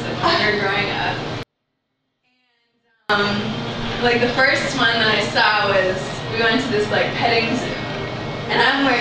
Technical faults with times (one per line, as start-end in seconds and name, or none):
1.43-3.09 24-bit alignment error (too quiet)